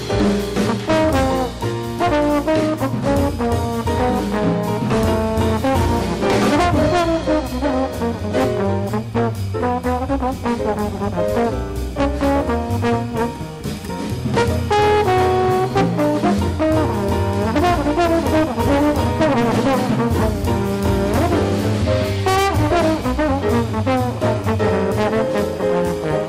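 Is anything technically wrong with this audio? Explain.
Yes. Hard clipping runs through the whole clip. The signal arrives about 12 dB hotter than the stage can pass, so roughly 7 percent of samples are sliced flat at the ceiling. Those squared-off peaks add high harmonics, heard as harsh fuzz on every loud passage.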